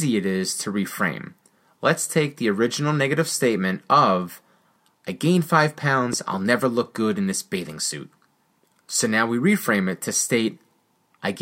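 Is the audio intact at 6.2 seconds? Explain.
No. From 6.13 to 6.36 s a loud pop sits on top of the speech as two sharp thumps peaking around 5 dB above it. This is likely a brief voltage pulse, from a switch, plug or static discharge, shaped by the downstream circuitry.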